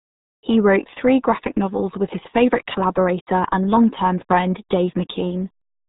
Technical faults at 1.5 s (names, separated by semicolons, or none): RealAudio 14.4 codec